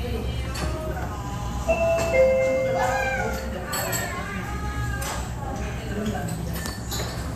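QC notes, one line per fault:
No faults detected.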